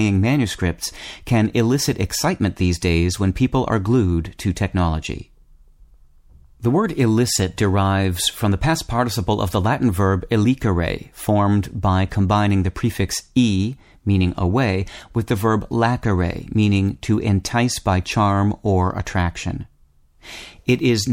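No technical faults can be heard anywhere in the recording; the speech runs uninterrupted with no dropouts, glitches or level disturbances.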